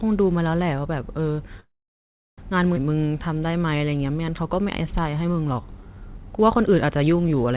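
At 1.6 s the speech stops dead and stays quiet until 2.40 s, with about 0.71 s of near-silence after a brief decaying tail. This is a call audio freeze. The likely cause is packets stalling in transit so the jitter buffer ran dry. Speech resumes where it left off, with nothing lost.

From 2.76 to 2.78 s there is a skip ahead. Roughly 0.4 s of speech is discarded and the two sides are butted together with only a few milliseconds of fill, so the audio lurches forward abruptly. This cancels much of the delay the freeze built up.

From 2.89 s to 7.36 s a jitter buffer slow-down follows. The receiver rebuilds its reserve by repeating single pitch periods and stretching pauses, adding 432 ms. Playback runs at 90% speed with unchanged pitch, giving drawn-out syllables. Throughout, the narrowband call path leaves nothing above 4 kHz, which fits G.711 A-law.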